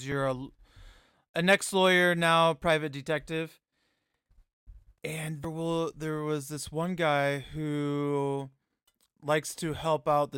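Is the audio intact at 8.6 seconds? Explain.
Yes, at 8.6 seconds the speech runs through cleanly, with no dropout, click, distortion or other fault to be heard at that moment.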